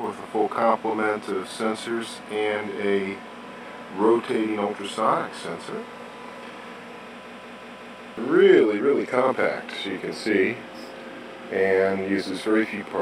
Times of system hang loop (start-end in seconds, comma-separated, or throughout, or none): 7.24-8.17